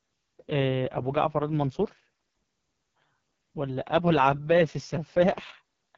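Throughout, the speech has passed through the AMR wideband (HD Voice) codec at its lowest mode, which fits a 6.6 kbit/s rate. The vocal tract model is starved of bits, leaving the speech rough and raspy, with nothing above about 7.3 kHz.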